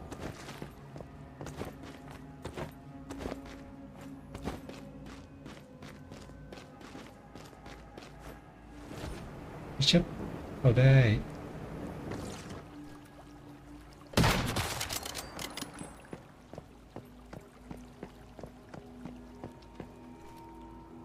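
No technical faults are audible anywhere in the audio.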